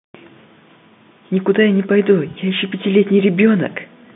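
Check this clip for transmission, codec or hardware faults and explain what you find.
Nothing here points to a transmission, codec or hardware problem: the speech carries the ordinary narrow band of G.711 telephone coding, roughly 150 Hz to 3.6 kHz, which fits a standard 64 kbps mu-law line, with at most a faint trace of its level-following quantisation noise.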